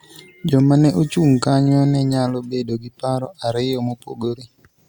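Listening closely to the speech, nothing in it stood out as a technical fault.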